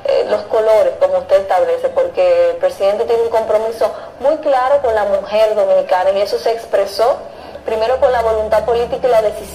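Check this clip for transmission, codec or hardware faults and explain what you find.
One fault is present. At 6.09 s there is a bit error spike, a single sharp tick. A flipped bit threw three consecutive samples off by a power of two, peaking at about -18 dBFS, before they snapped back. The click is broadband and unrelated to the surrounding sound.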